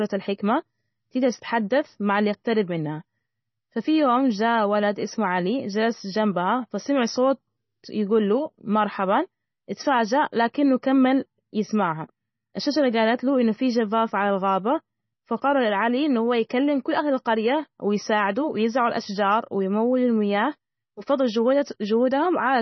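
It's a speech clip, and the whole thing sounds heavily squeezed, most likely by MP3 compression at a very low bitrate, something like 24 kbps. Nothing survives above 5.9 kHz, so it's dull, and the starved encoder leaves a watery, swirly texture, with chirpy s sounds and smeared attacks.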